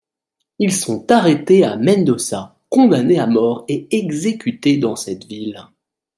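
Listening to this speech recording, nothing stood out as a technical problem at any point.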